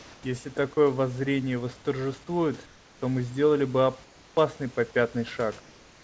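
In four pauses, from 0 to 0.23 s, 2.66 to 3.02 s, 4.04 to 4.37 s, and 5.6 s to the end, the room's background is replaced by comfort noise: a smooth, featureless hiss, about 1, 4, 3 and 2 dB quieter than the real background heard elsewhere. The likely cause is discontinuous transmission, where the sender goes quiet during pauses and the receiver substitutes synthetic noise, here limited to 8 kHz like the rest of the call audio.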